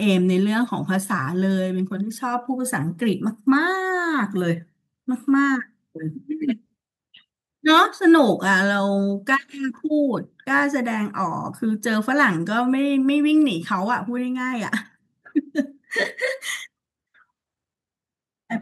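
No technical faults occur at any point in the recording.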